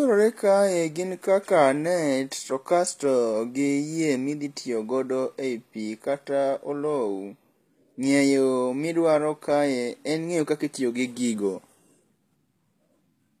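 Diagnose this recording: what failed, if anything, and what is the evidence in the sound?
The damage sits at the codec stage and runs the whole way through. The top end of the speech stays bright but sounds synthetic: s sounds come out gritty and a bit lispy, with a metallic sheen. That points to HE-AAC compression, likely at a low bitrate, something around 24 kbps. Only the lower band is really coded; the treble is copied up from below and shaped with a rough envelope, so its harmonics don't line up with the real ones.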